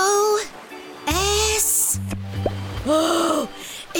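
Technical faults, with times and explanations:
2.74 s, overlap between stream segments. A tiny skip occurs here. Two adjoining segments claimed the same stretch of time, so the player discarded what it took to be a duplicate. That audio was never actually doubled. Roughly 16 ms of real sound disappears. The waveform on either side no longer lines up. It jumps abruptly from one value to another.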